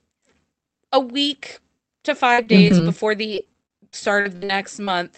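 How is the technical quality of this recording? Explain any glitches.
The speech comes through a call path whose top end is cut at about 8 kHz, and there are two bursts of repeated packet loss (robotic sound).

The first runs from 2.33 to 2.98 s, right after "a week to". The second is longer, from 3.35 to 4.88 s. Packets kept going missing, and each hole was papered over by stretching the last bit of audio. The first burst has four holes of up to 46 ms, covering about 17% of the span. The second has eleven, up to 57 ms, about 20%. You hear choppy speech with fragments dropping out.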